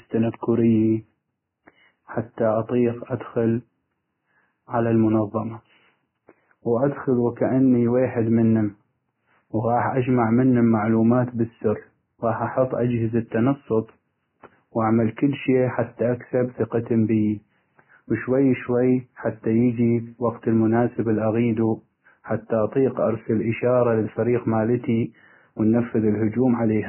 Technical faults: Vorbis compression

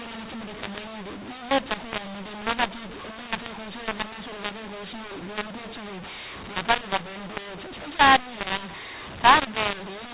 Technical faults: mu-law and A-law mixed up

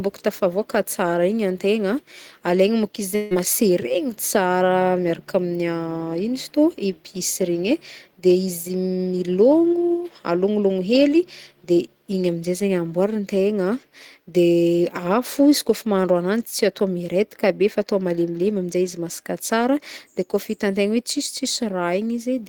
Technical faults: long network dropout

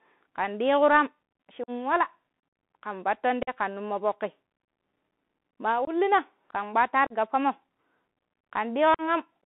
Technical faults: Bluetooth CVSD headset codec; unconcealed Bluetooth headset packet loss

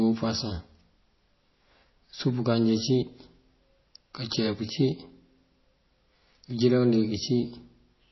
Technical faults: MP3 compression

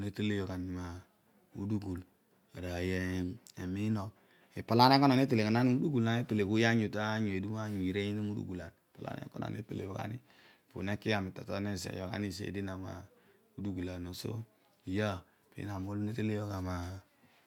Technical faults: none

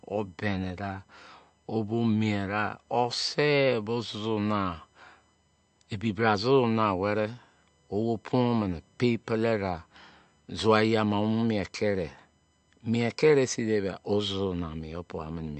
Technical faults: USB whine; MP3 compression

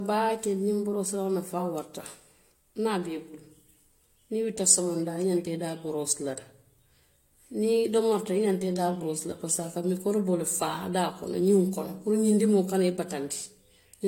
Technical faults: transcoding between lossy codecs

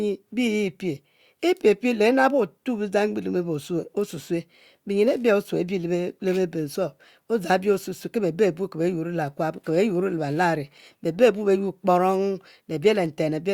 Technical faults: none

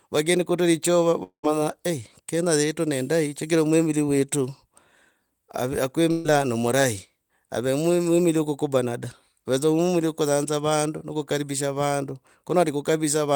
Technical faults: long network dropout; burst of packet loss

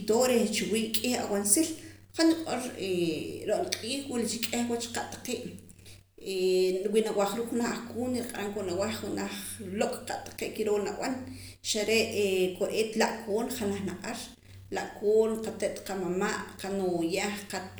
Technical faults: none

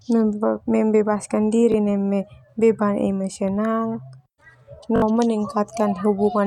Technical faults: repeated buffer

